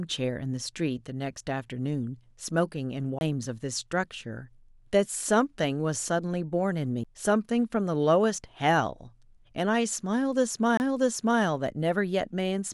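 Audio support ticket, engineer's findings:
CD skip on the speech at 3.19–3.21 s, 7.04 s and 10.77–10.80 s. Brief tick, a mute of a few tens of milliseconds, then the laser resumes on another track turn. Unlike a plain dropout, playback continues from a displaced point, not where it stopped.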